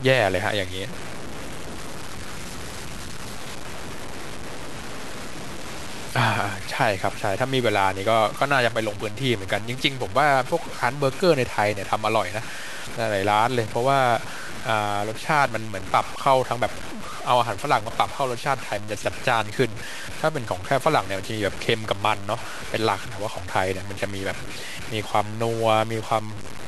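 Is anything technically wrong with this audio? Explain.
Yes. Throughout the speech a grainy, gritty distortion tracks the voice, with quiet tails sputtering or dropping to silence. This likely comes from low bit depth without dither, consistent with 6-bit truncation and error only about 15 dB below the signal.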